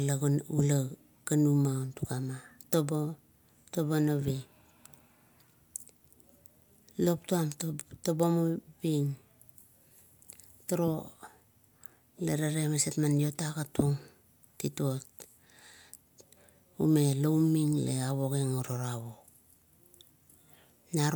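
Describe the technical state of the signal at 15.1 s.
The signal at 15.1 s is intact, with no audible fault at that moment.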